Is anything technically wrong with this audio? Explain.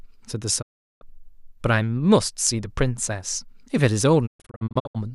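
Yes, a digital broadcast dropout occurs twice in this speech. From 0.61 to 1.03 s the receiver stopped getting valid frames and muted, so the sound fades out over 20 ms into about 0.38 s of silence before returning. From 4.25 to 4.97 s it breaks up into several short holes totalling 0.41 s across 0.67 s, the longest 0.12 s, which points to frames repeatedly failing their checks. The speech sent during both gaps is simply gone.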